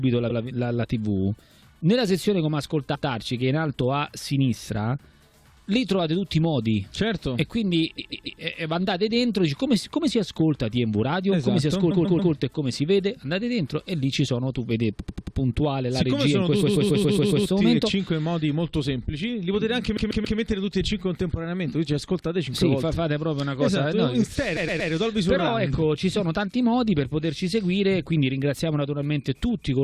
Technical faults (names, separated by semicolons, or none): repeated frames